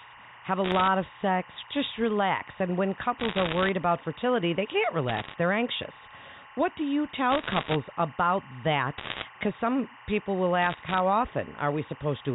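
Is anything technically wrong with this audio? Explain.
Yes, there are two problems in this speech.

Timecode bleed runs throughout. Square-wave code leaks in from a neighbouring line, giving a steady chirping warble at about 1 and 2 kHz, roughly 20 dB under the voice. Its rhythm fits 23.976-frame code. Unlike scattered clicks, it never stops.

Bit errors on a digital phone line appear at 0.64–0.88 s, 3.19–3.69 s, 5.08–5.34 s (after "about fertility they can't", before "they're anxious"), 7.31–7.76 s (after "do you"), 8.98–9.24 s and 10.62–11.00 s (after "some people will"). Flipped bits on the A-law telephone line each corrupt a single sample, producing bursts of sharp crackling ticks. About 0.7 to 3 percent of bits are hit, densest near 9 s. Unlike the timecode's tonal warble, these are random, broadband impulses confined to short bursts.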